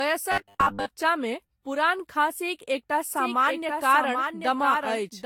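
The whole clip has a swirly, hollow, smeared quality with nothing above 17.3 kHz, which points to generation loss, likely from re-encoding about five times with Vorbis. From 0.32 to 0.91 s the speech turns into a metallic 100 Hz buzz, robotic sound from repeated short buffers, likely around 10 ms chunks looped while most of the real audio got skipped. From 3.17 s to the end there's a doubled audio track, likely a second copy about 5 dB quieter trailing roughly 0.7 s behind.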